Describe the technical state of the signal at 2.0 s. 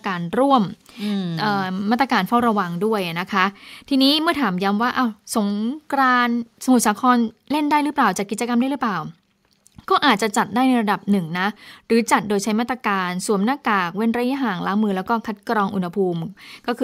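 At 2.0 s the speech signal is intact, with no audible technical fault at that moment.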